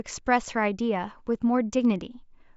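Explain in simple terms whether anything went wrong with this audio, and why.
Nothing went wrong here; the speech comes through steady and unbroken the whole way, with nothing that stands out as a problem.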